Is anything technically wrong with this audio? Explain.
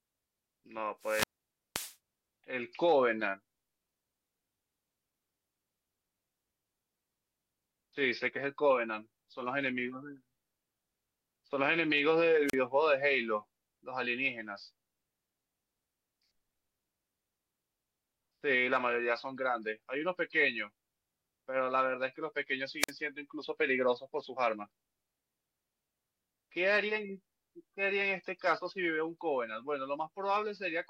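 Yes, there's wireless microphone squelch dropout three times: 1.00–1.96 s (about half a second muted), 12.47–12.54 s and 22.80–22.91 s. Each time the radio signal fades, hiss swells, and the receiver's squelch briefly cuts the speech to near silence.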